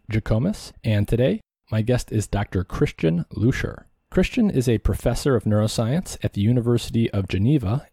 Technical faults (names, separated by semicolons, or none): none